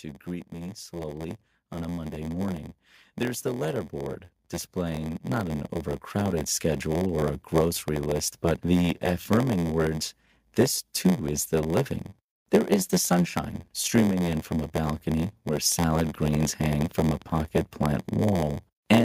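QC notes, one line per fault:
throughout: block size mismatch (padded). Each block arriving is shorter than the 512-sample block the next stage reads, so every block ends in a stretch of zeros. Those regular gaps produce a buzz at 86.1 Hz, and the speech runs slow at 0.938 times normal speed while keeping roughly its usual pitch.
0.05 to 7.22 s: automatic gain rising. The gain control judged the input too quiet and brought its gain up by about 12 dB over these seven seconds. Speech and background swell together, ending just before "a grocery list but".
15.99 to 17.39 s: train of clicks. About twenty evenly spaced clicks at 13.9 per second, each peaking at roughly the level of the speech, tick over everything between "from a balcony where" and "plant wall". The likely cause is interference from nearby equipment or a faulty connection or power supply.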